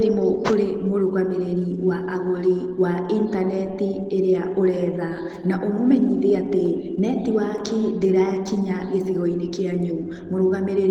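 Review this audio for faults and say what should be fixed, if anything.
Opus voice compression is audible throughout the speech. The damage is plainly audible. Its character fits hybrid-mode Opus at about 16 kbps, where a SILK layer codes the band below 8 kHz coarsely and a thin CELT layer covers the rest up to 20 kHz. To prevent it, encode at a higher Opus bitrate or keep an uncompressed master.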